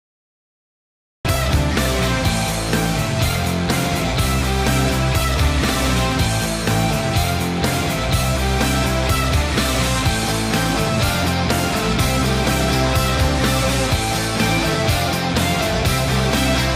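For the first 1.25 s there is nothing at all, only flat digital silence, and then at 1.25 s the sound bursts in already under way, with no attack or gradual rise to ease it in. That is a cut-off start: capture or streaming began late, so the opening of the sound was never recorded, and the file jumps straight from empty samples into the middle of whatever was happening.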